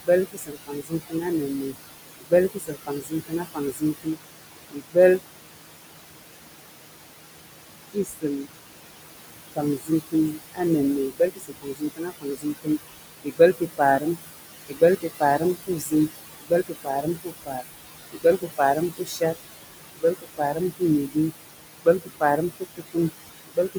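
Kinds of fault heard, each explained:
Noise suppressor artifacts, throughout the clip: the suppressor estimates the steady background and lowers every frequency band it judges to be noise, frame by frame, here by about 20 dB. The room noise sits only about 9 dB below the speech, so the suppressor has to work hard. The noise sinks away in the gaps between words and rises back underneath them, giving an audible pumping of the background rather than a steady floor.
Speech cut by the noise suppressor, 0.05–4.18 s, 4.71–5.21 s, 7.88–8.52 s, 9.55–19.34 s and 19.95–23.78 s: the suppressor mistakes quiet parts of the speech for noise and turns them down with the background, by up to about 22 dB. The longest spans are the first four seconds and the stretch from 9.55 to 19.34 s. Within each span only some moments are hit, roughly two seconds near the start and about four seconds in that long middle stretch. 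Those moments sound swallowed or faint.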